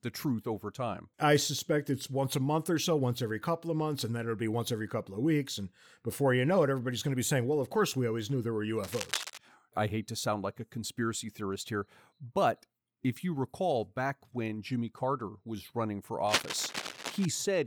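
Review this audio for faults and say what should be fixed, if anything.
Cable scratch noise rasps over the speech from 8.82 to 9.38 s, after "always knew there were", and from 16.27 to 17.25 s, after "was running for", the second burst louder and nearly level with the speech. Unlike regular clicks or steady crackle, it comes in dense, irregular rustling bursts, which points to a likely worn cable or connector whose contact resistance jumped as it moved. Replace or clean the worn cable and connectors, and fix them in place so they cannot shift during recording.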